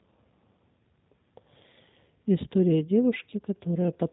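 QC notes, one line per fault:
throughout G.729 codec: speech is rebuilt from a vocal tract model, pitch predictor and sparse pulses, so it sounds plainly rough and synthetic, with nothing above 4 kHz, which points to an 8 kbit/s G.729A stream; unlike plain low-passing, that grainy pulse texture remains.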